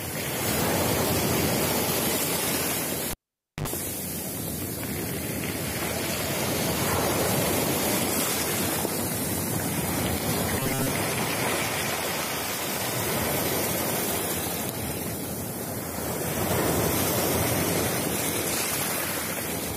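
At 3.11 s a live cable is pulled out and pushed back in, and the signal is cut for about 520 ms. A pop opens the gap, near silence follows, then a 74 ms burst of 50 Hz mains buzz as only the tip touches, and a second pop ends it at 3.68 s.

From 10.60 to 10.92 s the likely cause is audio arriving too seldom, so short buffers are repeated while most of the real sound is skipped. That imposes a rigid 133 Hz metallic buzz, which fits repeats of about 7.5 ms, giving a robotic sound from repeated short buffers.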